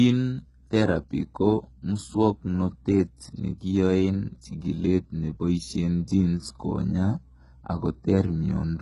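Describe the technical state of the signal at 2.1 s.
At 2.1 s the speech carries heavy HE-AAC compression damage, present throughout the clip. The likely cause is spectral band replication: only the lower spectrum is coded, and the treble is rebuilt by copying lower bands upward under a coarse envelope. That treble sounds synthetic, with misaligned harmonics making sibilants gritty and metallic. Nothing is present above 11.1 kHz, and the damage level points to a very low bitrate, around 12 kbps.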